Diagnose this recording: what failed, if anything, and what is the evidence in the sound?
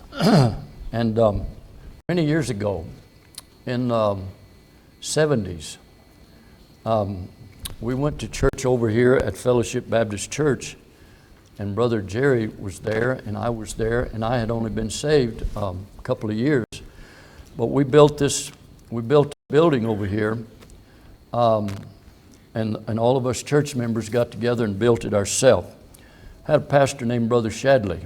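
Block of digital silence at 2.01 to 2.09 s, 8.49 to 8.53 s, 16.64 to 16.73 s and 19.33 to 19.50 s: the sound drops abruptly to silence and returns with no fade. The driver or buffer stage missed its deadline, and the lengths of about 43, 85 and 171 ms fit whole buffers of 2048, 4096 and 8192 samples.

Loose connector crackle at 12.84 to 13.04 s and 21.68 to 21.84 s: short, irregular bursts of scratchy crackle. This points to the analogue wiring, where an intermittent contact repeatedly opens and closes, chopping the signal.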